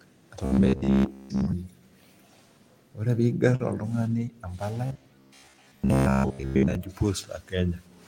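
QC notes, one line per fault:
0.45–1.53 s and 4.86–6.75 s, robotic sound from repeated short buffers: a metallic 66.7 Hz buzz. A 15 ms chunk likely repeats, replacing most of the real audio.
3.55–3.61 s, short concealed packet loss: 40 ms never arrived. The gap was filled by extending the preceding sound, leaving a brief smear.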